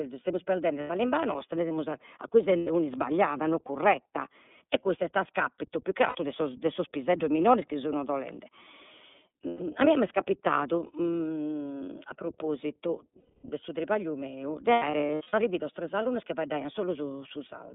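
The whole clip passes through the iLBC codec, in what sounds like its 13.33 kbps 30 ms mode, limiting the band to 200 Hz to 3.6 kHz and leaving the speech plainly rough and synthetic. Lost iLBC frames make the decoder hold a buzzy, noisy repeat of the last pitch cycle at 0.81 s for 90 ms, 2.58 s for 90 ms, 6.08 s for 60 ms (between "a 'iscapitu più che" and "'e sos piseddos minores"), 9.48 s for 120 ms, and 13.20 s for 240 ms before "su tripagliu meu de". From 14.72 s to 15.34 s, after "su tripagliu meu de" and before "arrividos tres alunnos chi", 330 ms of losses are scattered in bursts of up to about a tenth of a second.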